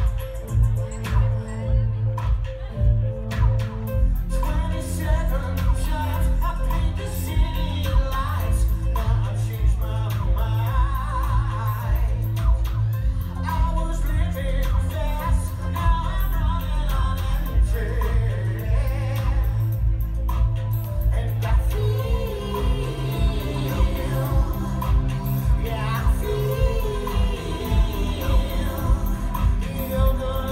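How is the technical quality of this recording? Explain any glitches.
Nothing in the recording shows a glitch, so its technical quality leaves nothing to explain.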